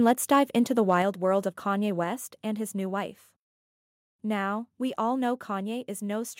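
From 0.06 to 0.37 s, just before "into the", the loudest peaks take on a harsh, crackling edge. This is microphone overload: input gain was likely set too high, so peaks ran about 1 dB past the converter's limit and a small fraction of samples had their tops flattened.

At 1.02 s, between "into the" and "world of", speech and background suddenly drop by about 4 dB, then again by about 3 dB at 2.04 s, just before "and his new wife". Each is a microphone volume stepped down, likely the call software cutting input gain in one jump in response to the earlier clipping.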